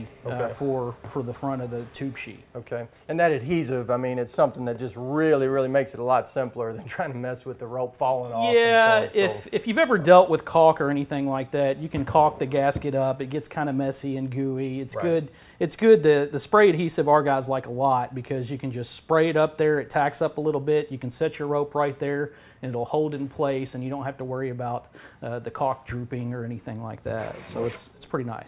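No technical faults can be heard anywhere in this audio.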